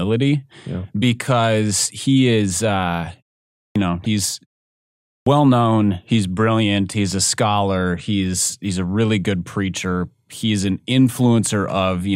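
At 3.64 s, after "because he is uh" and a half-second pause, a clipped start after a pause swallows about 115 ms: the output device is waking from sleep, so the next word bursts in abruptly without its opening sounds. The speech itself is lost. From 4.03 to 4.06 s, damaged data in a compressed stream makes the decoder lose sync and hunt for the next frame, heard as a brief glitch, not a missing onset. At 5.16 s, after a 0.79 s pause, the same wake-up delay cuts about 103 ms before "known he's brilliant he's".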